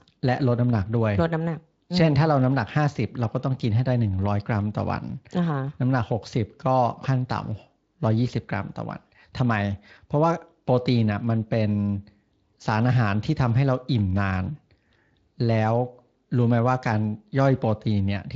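No technical faults detected.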